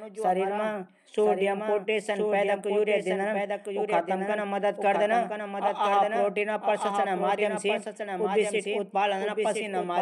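Throughout, the speech carries a doubled audio track: a dry, full-band copy trails about a second behind, a few decibels quieter, likely from a second, slower capture path.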